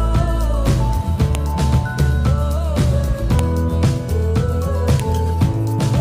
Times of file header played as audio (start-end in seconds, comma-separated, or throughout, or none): 1.35, 3.39, 5.00